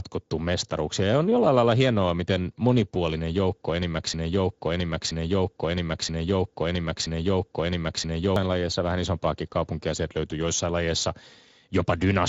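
A speech recording carrying Speex codec damage throughout and one broken-record loop. The CELP coding is plainly audible: with too few bits for the excitation, the speech sounds noisy and hoarse, a grain that fits a middle-to-low setting around 16.8 kbps. On a spectrogram the energy stops at about 7.7 kHz. From 4.14 s to 8.36 s, just after "hienoa miten monipuolinen joukko", a fragment of about 0.98 s repeats exactly four times back to back before the sound resumes at "lajeissa vähän isompaakin kaupunkia". The likely cause is a player or stream stall that kept resending its last buffered piece, so the audio belonging to that span is lost. The waveform shows four identical envelope shapes in a row, and the spectrogram shows the same block pattern tiled across those four seconds.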